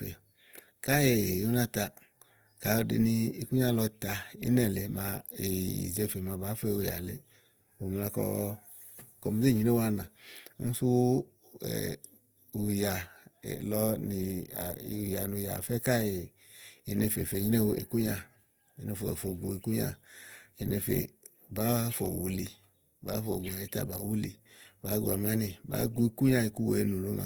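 Throughout the speech, the sound is rough and grainy, with a noisy fizz where the spectrum should be clean, yet the top end still reaches to about 20.2 kHz. This is likely Opus compression in its CELT music mode, working at a rate that fits roughly 24 kbps. Short of bits, the encoder keeps each band's energy but fills detail with noise or folded copies of lower bands. A spectrogram shows few holes, but harmonics smear into speckled, noise-like texture.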